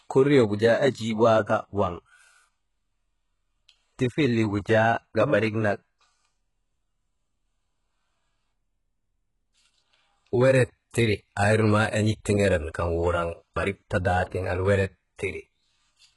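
Throughout the speech, the likely cause is HE-AAC compression at a very low bitrate, near 12 kbps. The treble is rebuilt from copied lower bands rather than coded, and nothing survives above 11.5 kHz, so sibilants come out gritty, metallic and lispy, with heavy codec damage overall.

From 10.91 to 10.94 s there is pre-echo. A sharp attack landed late in a transform block, so quantisation noise sized for the loud onset spread back about 35 ms into the quiet before it, giving a brief hiss and a softened attack.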